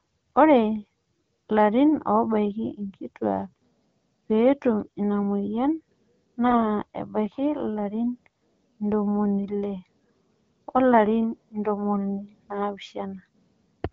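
AMR bit errors strike from 6.46 to 6.62 s, a burst that fits a handful of corrupted 20 ms frames on a poor radio link. The less protected bits in each frame were flipped while the core checksum still passed, so the decoder accepted them. Its excitation pulses landed in the wrong places and the fine pitch, gain and spectral values drifted, turning the speech hoarse, scratchy and gargly while keeping roughly its pitch and loudness. The damage points to an error rate of around 4 percent. Around it, the AMR wideband (HD Voice) codec carries clear speech with only light coding roughness.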